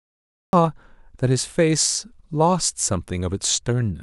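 The clip opens with a cut-off start: from 0.0 to 0.53 s there is pure digital silence, and at 0.53 s the speech begins abruptly, mid-sound, with no natural onset. Capture evidently began late, after the talker had already started. On a waveform this appears as a flat line that jumps straight into the speech signal; on a spectrogram, a blank region ending in a hard vertical edge where energy appears across the band at once.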